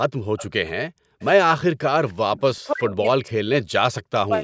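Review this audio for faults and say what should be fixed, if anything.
Background gated by the echo canceller pulls the room sound down by about 40 dB at 0.07–0.37 s, 0.86–1.19 s and 1.70–1.86 s, while the far end's loudspeaker plays. Only the background vanishes and returns, not the talker. Easing the suppressor's attenuation or adding comfort noise would prevent this.

Echo leak appears at 0.37–0.47 s, 1.21–1.25 s and 2.35–2.40 s as faint, delayed scraps trailing the sound by 298 ms, roughly 20 to 35 dB down. A fixed delay on a copy points to an echo canceller that likely failed to converge fully, not to room reverb. Better canceller adaptation or loudspeaker placement would prevent it.

Speech suppressed in double talk cuts the talker by around 40 dB at 2.61–3.61 s and 4.17–4.32 s, likely because both sides spoke at once. Here the voice itself drops, unlike the background-only gating above. 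A double-talk detector that protects near-end speech would prevent it.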